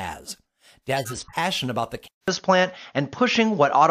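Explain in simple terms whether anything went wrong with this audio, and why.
Two things went wrong. From 0.96 to 1.36 s there are short squeaks and noise bursts: a corrupt frame decoded problem. A handful of damaged chunks of compressed data were played anyway, so sound landed at wrong pitches. Unlike a steady dropout, it's brief, chirpy garbage rather than silence.

At 2.08 s there's a 0.2 s gap, then the rest of the clip sounds duller and slightly different in loudness, with nothing above 6.7 kHz and a faint new hiss. The likely cause is the input switched to a poorer device. Unlike a passing glitch, the changed tone persists to the end.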